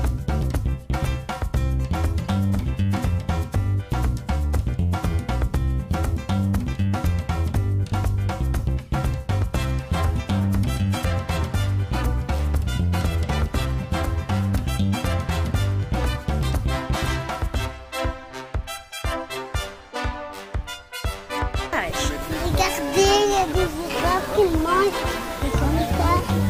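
No technical faults can be heard anywhere in the clip.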